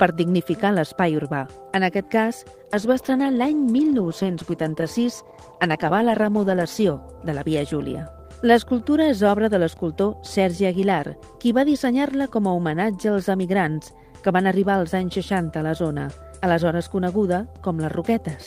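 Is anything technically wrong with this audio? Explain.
Yes. A call bitrate drop runs from 2.73 s to 6.93 s. The bandwidth estimate for the call fell, and the encoder was pushed from 32 kbps down to 14 kbps. It stayed at that low rate for about 4.1 seconds. With less than half the bits, the codec quantises more coarsely and trims the upper frequencies. Across that stretch the sound turns rougher, watery and duller, then clears once the rate recovers.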